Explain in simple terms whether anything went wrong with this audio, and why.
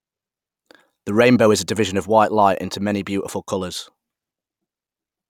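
Nothing went wrong here: the speech comes through with no audible technical fault anywhere in the recording.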